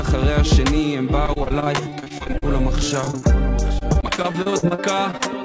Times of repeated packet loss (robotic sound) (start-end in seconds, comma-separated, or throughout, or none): 1.26-2.44, 3.01-3.23, 3.79-5.27